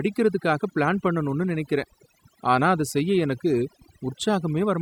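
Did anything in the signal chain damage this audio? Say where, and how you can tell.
Yes. Overdone noise removal runs through the whole speech clip, introduced at the processing stage where a noise suppressor sits, set far too aggressively. The background between phrases collapses to near silence dotted with twinkling, chirpy specks. That happens because the suppressor mutes individual frequency bands whenever their level falls near its noise estimate, so quieter parts of the speech are cut along with the noise.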